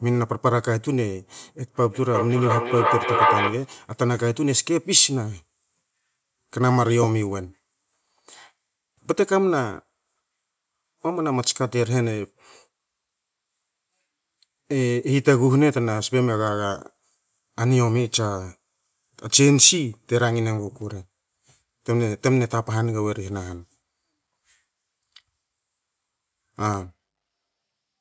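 From 1.88 to 3.77 s the speech comes back roughly every 400 ms, thin and ringing, piling up to about 1 dB above the original: feedback echo between two devices sharing one room.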